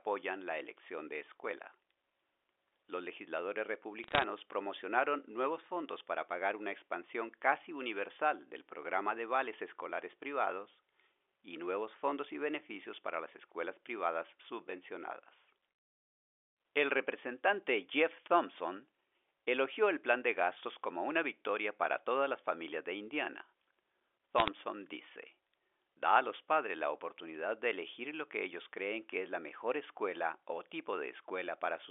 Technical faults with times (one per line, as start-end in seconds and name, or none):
4.04-4.24 bit errors on a digital phone line
24.38-24.48 bit errors on a digital phone line